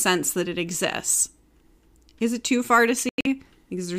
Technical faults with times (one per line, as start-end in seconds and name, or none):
3.09-3.27 corrupt frame muted